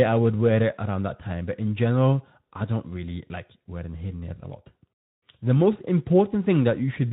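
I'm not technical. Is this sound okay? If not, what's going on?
Yes, nothing wrong can be heard in this speech.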